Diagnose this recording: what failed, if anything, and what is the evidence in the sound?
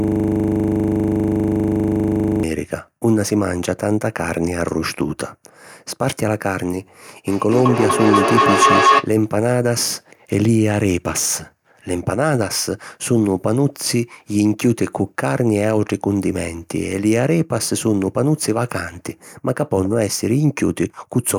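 From the very start to 2.43 s there is a steady 25 Hz buzz: one 40 ms slice of audio repeating about 60 times. This is a system hang loop at the driver or buffer stage. The machine froze while the hardware kept replaying its ring buffer.

Between 7.27 and 9.13 s a ringing tone near 1 kHz swells to about 5 dB above the speech, pulsing roughly every fifth of a second. This is feedback howl from an acoustic loop during the call: two devices in one room re-amplify each other's output until one tone dominates.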